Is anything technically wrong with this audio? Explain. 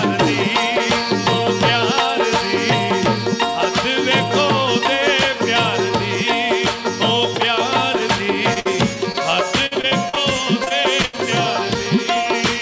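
Yes. The stretch from about 8.5 s to 11.2 s has a run of packet-loss faults, heard through a call path whose content stops at 8 kHz, which fits a wideband G.722 link at 64 kbps.

Short concealed packet loss occurs at 8.54–8.58 s and again at 9.12–9.16 s. Each time about 20 ms of audio never reached the decoder in time. The receiver patched the hole by extending the preceding sound and then crossfading back into the real signal. The result is a brief smear or wobble, and a short transient at that point can disappear entirely.

A burst of packet loss follows at 8.60–8.67 s, immediately after the first short gap. About 60 ms of consecutive audio went missing. The concealment extended the last sound for roughly 50 ms while fading it down, so a voiced sound turns into a held buzz and anything else into a decaying hiss. Playback then picks up further along, and the material in between is simply gone.

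Repeated packet loss (robotic sound) appears in two stretches. From 9.66 to 10.18 s there are five separate gaps totalling about 160 ms, the longest 51 ms, so nearly a third of that span is synthetic fill. From 10.64 to 11.16 s, four gaps total about 140 ms, the longest 78 ms, covering about a quarter of the span. Because the patches recur so closely, the audio sounds choppy, with fragments missing throughout.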